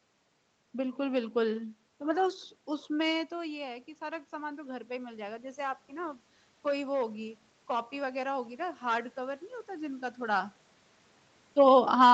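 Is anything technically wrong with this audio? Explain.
Yes. Automatic gain rising runs from 2.66 to 6.27 s. After the level drops by about 10 dB when the talker moves back, the gain control slowly adds about 5 dB. Unlike a talker's own movement, the voice and the room noise swell together.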